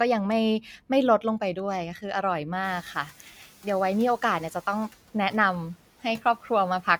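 At 2.63 s, just after the room noise jumps sharply at around 2.5 s, the noise suppressor is catching up: its noise estimate lags the new, louder background, so the noise passes with little reduction, then sinks by about 5 dB as the estimate settles over 480 ms, finishing at 3.11 s. Compressor pumping would rise and fall repeatedly with the speech level. This is a single, one-way settling after the noise change.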